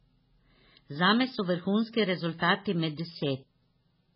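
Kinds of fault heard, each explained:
MP3 compression: Nothing reaches above 5.5 kHz, and the speech sounds heavily watery and swirly, likely from MP3 encoding at a starved rate that fits about 16 kbps. A spectrogram shows a flat ceiling at 5.5 kHz with patchy, flickering blocks of energy beneath it.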